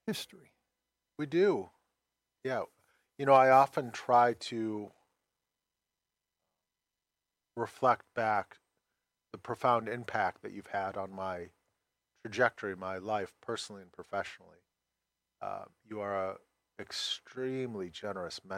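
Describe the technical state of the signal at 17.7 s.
At 17.7 s the signal is intact, with no audible fault at that moment.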